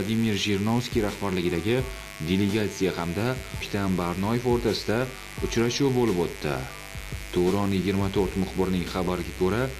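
Mains buzz runs from start to finish, sitting roughly 15 dB below the wanted sound. Sharp switching spikes from something like a dimmer, a rectifier or an unshielded cable are getting into the signal path twice per cycle of the 50 Hz supply. Because the spikes are so abrupt, they carry harmonics of 50 Hz stacked up into the kilohertz range, giving a steady, raspy buzz rather than a smooth low hum.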